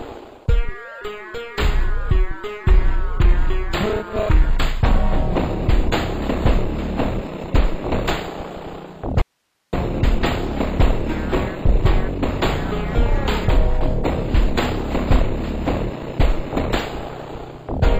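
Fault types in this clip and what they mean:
Audio dropout to a faint residue: At 9.22–9.73 s the sound cuts out abruptly to hiss roughly 50 dB down, likely an upstream signal loss while the path stayed live.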